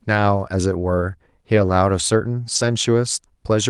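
A rougher, noisier patch with no gap at 1.57 to 1.71 s, then again at 2.55 to 2.73 s: each is a lost packet rebuilt from error correction. Packets went missing, and the decoder played the low-bitrate copies carried in the following packets of this Opus call.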